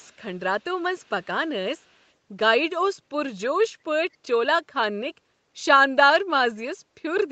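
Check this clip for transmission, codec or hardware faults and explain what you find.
One fault is present: a faint echo leak in four places. It appears at 0.00 to 0.16 s, 0.60 to 1.26 s, 1.77 to 2.11 s and 4.13 to 4.17 s. A very quiet copy of the speech trails it by 214 ms. This likely comes from a far-end loudspeaker whose echo canceller let residue through.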